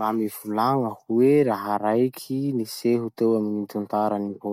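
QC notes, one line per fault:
No faults detected.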